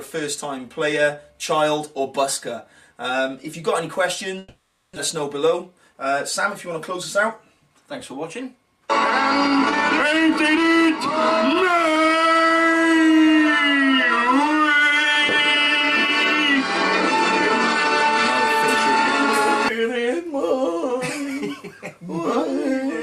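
A long network dropout runs from 4.38 to 4.97 s. The sound smears into a fading buzz for about 0.58 s, with no full silence, and resumes with roughly half a second of audio missing. The likely cause is a stretch of packets that never arrived, during which the receiver extended the last sound.

A jitter buffer speed-up follows from 5.53 to 5.95 s. The audio plays at about 109% speed with unchanged pitch and sounds hurried. The receiver was trimming short pitch-period slices to drain surplus buffered audio, shedding around 50 ms in total.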